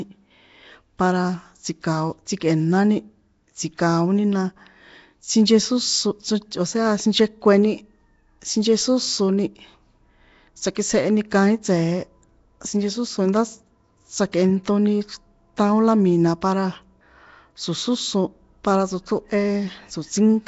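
Speech throughout has a rough, hissy halo and a smeared, underwater quality, with nothing above 7.7 kHz, pointing to likely Nellymoser compression at about 32 kbps: weak bands receive no bits and are filled with noise, producing the plainly audible damage.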